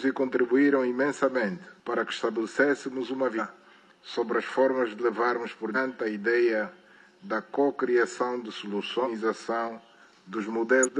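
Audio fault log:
3.35–3.40 s, 5.72–5.77 s, 9.01–9.08 s, 10.82–10.89 s: damaged data in a compressed stream. Corrupted frames throw the decoder out of sync. Each one gives a short glitch lasting about 50 to 70 ms.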